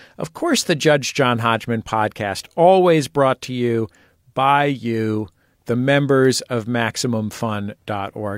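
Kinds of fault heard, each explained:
No technical fault can be heard anywhere in this speech recording. There is nothing here that calls for a fault description.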